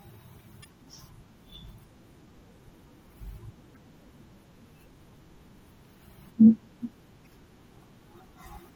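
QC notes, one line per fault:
Throughout: MP3 compression. Weak detail flickers in and out, giving a watery, swirly sound with smeared consonant attacks, likely from low-bitrate encoding that fits a 64 kbps MP3. Unlike stream damage, it never jumps or breaks, and stays present in every part.
0.62–0.66 s, 3.73–3.77 s, 7.23–7.27 s: damaged data in a compressed stream. Each is a brief chirp, squawk, click or short hole of about 44 ms, heard where the decoder misreads corrupted frames and resynchronises at the next header. This is a sudden break rather than the steady swirl of compression.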